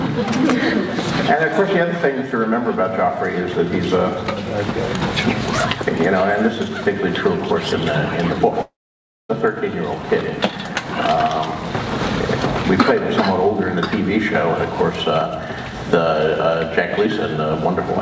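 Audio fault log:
8.62–9.31 s, long network dropout: the sound trails off as a fading buzz into 0.59 s of silence, then resumes with that stretch gone. It is too long for a brief glitch and is likely lost packets.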